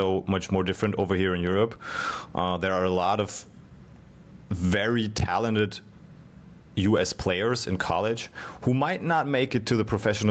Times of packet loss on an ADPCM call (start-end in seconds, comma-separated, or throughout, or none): none